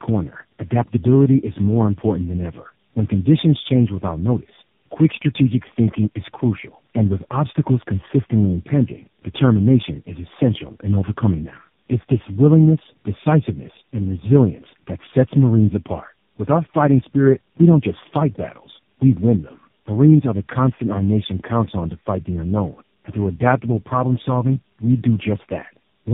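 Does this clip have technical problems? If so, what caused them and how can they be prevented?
Yes. Tandem speech coding throughout: the speech passed four low-rate coders in a row, from GSM full rate to AMR-NB, each recoding the previous one's decoded output, so it sounds rough, warbly and muffled with nothing above 3.7 kHz. Prevent it with transcoder-free operation, keeping one codec end to end.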